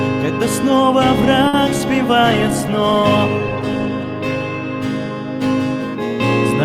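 A packet arriving late at 1.47 s left the jitter buffer empty, so the receiver stretched the last sound for about 60 ms until the data came in at 1.55 s, then resumed from the same point. Nothing is lost in this short stall from a late packet, but the sound hangs unnaturally, with a faint buzz or dip, and everything after it runs about 60 ms later than before. Shortly afterwards, from 1.77 to 1.81 s, 20 ms of audio never reached the decoder in time. This short concealed packet loss was covered by extending the preceding sound before blending back into the real signal, and it is audible as a brief smear or wobble where a fragment of the original has gone missing. From 2.3 s to 5.49 s the call's bandwidth estimate fell, and the encoder was pushed from 48 kbps down to 13 kbps, staying at that floor for about 1.62 s. This call bitrate drop makes Opus code far more coarsely and trim the upper frequencies, so through that stretch the audio turns rough, watery and muffled, with the top end dulled until the bitrate climbs back.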